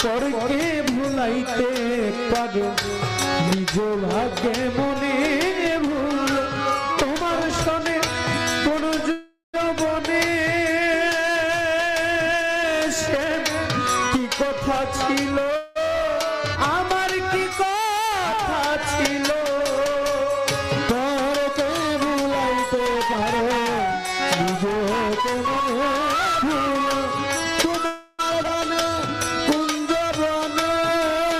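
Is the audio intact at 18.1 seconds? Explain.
Yes, the audio is intact at 18.1 seconds, with nothing there to indicate a dropout, click, distortion or other fault.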